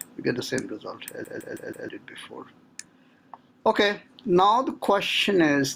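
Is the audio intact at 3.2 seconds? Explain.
No. Gain pumping runs through the whole clip, including 3.2 s. The gain swings by roughly 15 dB. Loud and soft parts sit squashed together. The likely cause is gain set far too high, with a fast limiter clamping down.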